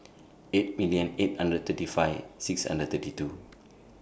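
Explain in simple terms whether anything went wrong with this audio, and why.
Nothing went wrong with this recording: the speech signal shows no audible technical faults at any point, so there is nothing that needs fixing.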